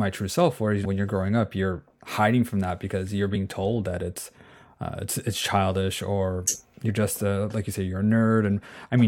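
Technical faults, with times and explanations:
0.84 s, 3.35 s and 6.88 s: damaged data in a compressed stream. Corrupted bytes in the encoded speech make the decoder misread a frame, lose sync and hunt for the next valid frame header, so each spot gives a brief chirp or blip lasting under 20 ms. The first lands just before "you're growing up you're", the second between "from that because you're" and "told that it's uh", the third between "it's it's childish or" and "just a like you".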